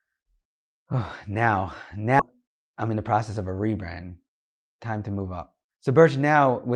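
Speech clip. At about 2.2 s the audio lurches forward with no gap, a skip ahead where nearly half a second was discarded and the edges were butted together. From 2.83 to 3.30 s, just before "of a rebrand", it runs about 8% fast at unchanged pitch: a jitter buffer speed-up, trimming around 50 ms of pitch-period slices to shed excess delay.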